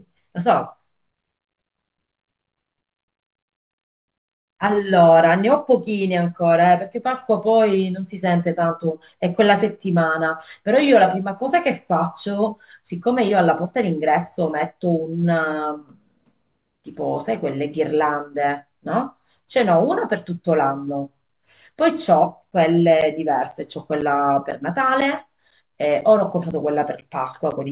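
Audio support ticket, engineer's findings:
Periodic USB or driver dropouts, 22.51–27.52 s: regular ticks every 0.5 s, around ten, each roughly 10 ms of audio replaced by silence. Probably a timed background task stalling the USB bus or audio driver. Waveform shows evenly spaced flat gaps; spectrogram shows thin broadband vertical lines.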